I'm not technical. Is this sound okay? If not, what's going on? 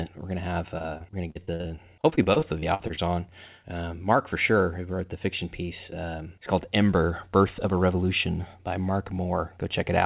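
No. From 0.78 to 2.99 s, repeated packet loss hit the call. Bits of audio kept going missing and were patched by stretching the last sound, so the speech turns choppy and robotic.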